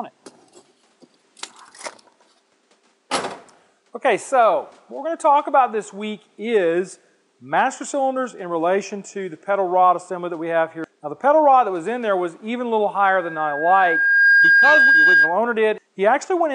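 At 13.03 s a loudspeaker feedback squeal begins. A microphone is picking up the loudspeaker it drives. At 1.6 kHz the loop gain passes one, so that frequency feeds itself and keeps growing. It swells over about a second and a half into a steady, piercing tone. It ends up around 5 dB louder than the rest of the sound. The squeal stops at 15.40 s.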